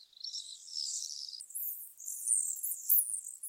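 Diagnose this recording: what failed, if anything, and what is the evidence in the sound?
Section at the wrong speed, from 1.40 s to the end. This likely comes from a playback or editing stage running the material against the wrong clock, reading samples about 1.89 times faster than they were recorded. Speed and pitch jump together at that point. The sound turns abruptly hurried and is raised by about ten semitones, close to an octave, and stays that way for the rest of the clip.

Sound dropped by the voice detector, in the codec's transmission control. The sender's detector likely judged real signal to be background and stopped sending, which fits Opus discontinuous transmission. At 1.89–1.97 s, 80 ms is replaced by comfort noise, and about 30 ms of actual sound is lost in the gap. A shorter dropout at 3.17 s swaps roughly 20 ms of sound for noise before the detector triggers again.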